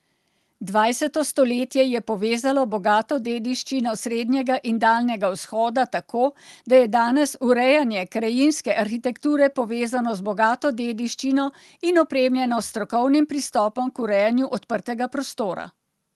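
No technical faults turn up anywhere in the speech, which carries only the ordinary character of a call-codec path limited to around 12 kHz.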